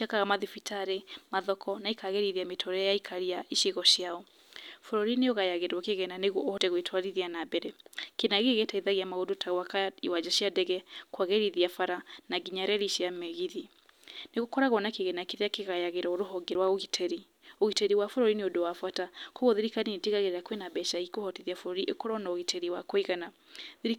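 At 6.58 s, just before "gwĩtwarithia na mbere", the speech skips forward. It skips again at 16.55 s, ten seconds later. This is audio missing between chunks. A few tens of milliseconds vanish, and the two sides butt together. Likely, the recorder dropped sound while switching 10-second chunks.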